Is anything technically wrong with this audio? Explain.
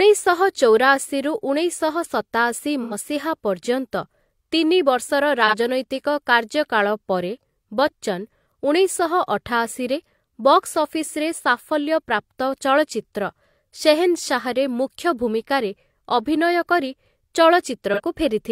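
Yes. The speech has AAC frame loss with concealment at 2.82–2.94 s, 5.47–5.54 s and 17.93–18.00 s. The decoder lost about 85 ms of data in the first gap, consistent with two AAC frames, and about 43 ms in each of the others, consistent with one frame. It patched each gap from the last good spectrum with scrambled signs or interpolated energy, so each one sounds like a brief smeared, noisy or phasey blur.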